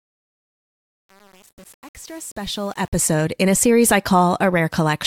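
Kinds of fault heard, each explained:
Truncation distortion on a fade: the speech fade runs from the start to about 3.05 s, but the gain stage is dropping low-order bits without dither, which fits a path keeping only 7 bits. From 0.0 to about 3.03 s the low-level waveform is reduced to a few coarse square steps, so the fade sounds gritty.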